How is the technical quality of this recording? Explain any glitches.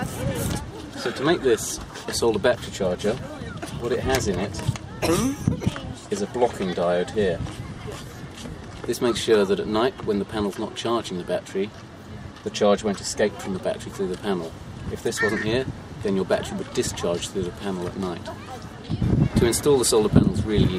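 One glitch stands out: a short stretch of chunks out of order from 5.70 to 5.74 s. One block of audio, about 21.33 ms long, was delivered a single chunk late and played after the block that should have followed it. No audio is lost, but the two blocks swap places, leaving three hard joins where the waveform jumps. The result is a brief jumbled flicker.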